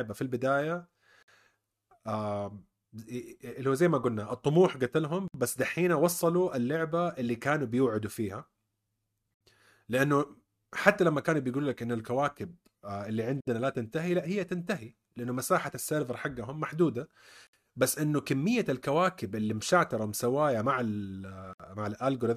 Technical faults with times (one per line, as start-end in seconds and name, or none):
1.23-1.28 gap at a join of encoded pieces
5.28-5.34 gap at a join of encoded pieces
9.34-9.41 gap at a join of encoded pieces
13.41-13.47 gap at a join of encoded pieces
17.47-17.53 gap at a join of encoded pieces
21.53-21.60 gap at a join of encoded pieces